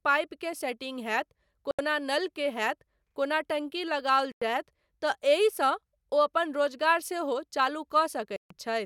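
A likely Bluetooth stall, with radio interference holding up packets until the headphone buffer ran dry, cuts the speech to silence three times: 1.71 to 1.79 s (77 ms), 4.32 to 4.42 s (97 ms) and 8.36 to 8.51 s (141 ms), each a clean dropout before the sound resumes.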